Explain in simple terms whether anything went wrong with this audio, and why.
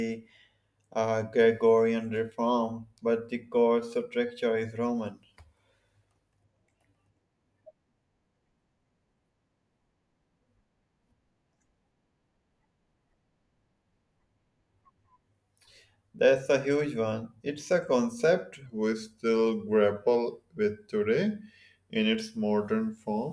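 From 18.66 s, just after "a concept", to the end, the speech turns slightly slow and lower, about 8% slower and roughly one and a half semitones down. This is a wrong sample rate fault: the audio plays back too slowly, consistent with 24 kHz audio played at 22 kHz.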